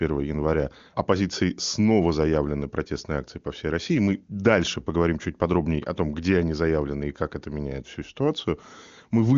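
Nothing stood out on listening to this speech, which carries the expected top end of a wideband phone call, stopping near 7.2 kHz.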